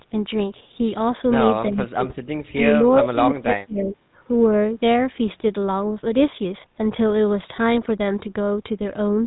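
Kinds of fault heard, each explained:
GSM full-rate codec: The whole clip has that buzzy, gravelly vocoder roughness and nothing above 4 kHz, pointing to the old 13 kbps GSM coder.
Speech suppressed in double talk: The speech ducks hard, up to about 40 dB, at 1.69–2.2 s, 2.53–2.61 s and 2.8–4.06 s, likely an echo canceller choking on both sides talking.
Echo leak: Faint scraps of the voice come back 340 ms late, about 25 to 30 dB down, at 2.91 s and 3.81–3.93 s, likely loudspeaker pickup slipping past the canceller.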